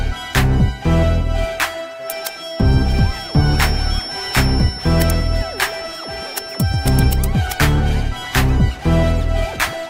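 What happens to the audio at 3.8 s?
At 3.8 s the audio carries a feedback whistle, running from 1.98 s to 7.25 s. The likely cause is loudspeaker output reaching the microphone with just enough loop gain to sustain a single frequency without letting it build out of control. The result is a thin, steady tone near 5.4 kHz sitting behind the sound, around 15 dB beneath it, that swells and fades slowly in level.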